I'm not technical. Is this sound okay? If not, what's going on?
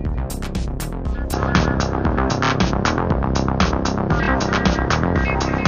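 No. From 1.33 s to the end, the sound turns duller and its level changes, with a new faint hiss, and nothing above about 6.6 kHz gets through. This is likely an input switched to a poorer device, such as a headset microphone. A simple tone filter wouldn't bring in new background noise or a level change at the same moment.

There are also repeated frames at 2.44–2.50 s and 4.22–4.28 s. Each time, a tiny 26-millisecond slice of sound plays twice more, heard as a quick stutter. Unlike a dropout, nothing goes missing. Each stutter adds sound, about 52 milliseconds.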